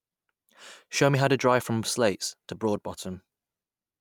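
No technical faults are audible anywhere in the recording.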